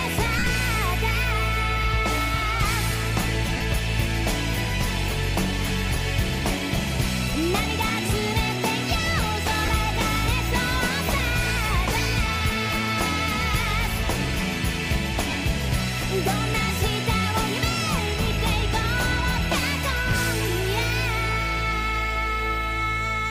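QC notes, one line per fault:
0.39 to 15.33 s, lost LE Audio frames: dropouts at 0.39 s (about 60 ms scattered over 75 ms, longest run near 50 ms), 3.57 s (38 ms), 9.66 s (23 ms) and 15.30 s (23 ms). The LC3 decoder repeats the last spectrum with random signs, so tones smear into brief noisy patches.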